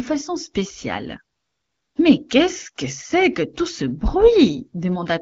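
From 1.37 to 1.95 s, just after "façon spéciale", the real background gives way to a smooth, steady hiss that switches in and out. This is AMR comfort noise: for 0.58 s no speech frames were sent, so the receiver synthesised noise from a rough level-and-spectrum description, over otherwise light wideband coding.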